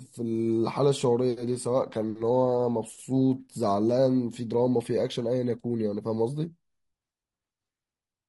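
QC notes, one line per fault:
Throughout: low-delay AAC compression. The speech sounds rough and grainy, with noise filling the gaps between harmonics and a thin, synthetic-sounding top band. This is likely AAC-ELD at about 32 kbps, whose short frames resolve pitch harmonics poorly and leave too few bits.
3.47 to 3.50 s: AAC frame loss with muting. A brief soft-edged gap of about 20 ms, consistent with one lost frame whose spectrum was zeroed. Overlapping windows fade the sound out and back in.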